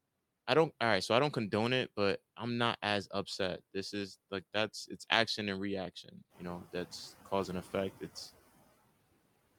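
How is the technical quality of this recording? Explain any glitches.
The recording has three glitches, all from the noise suppressor.

Noise suppressor artifacts run through the whole clip. The suppressor pulls down the frequency bands it reads as steady noise, frame by frame, by about 19 dB here. Because it works frame by frame, the background dips in the gaps and creeps back up under the speech.

Speech cut by the noise suppressor happens between 6.04 and 6.41 s. The suppressor mistook some of the speech for noise and turned it down along with the background, by about 12 dB at the deepest point. Only about a tenth of a second within that stretch is actually hit, so you hear soft sounds or word edges going faint and swallowed rather than a clean dropout.

The noise suppressor catching up overlaps that, from 6.3 to 6.62 s. Around 6.5 s the room noise jumps by about 11 dB, though it still sits about 19 dB under the speech. 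The suppressor's noise estimate lags behind the jump, so at first the louder background comes through with only about 10 dB of reduction. Over roughly 320 ms the estimate adapts and the noise sinks back down.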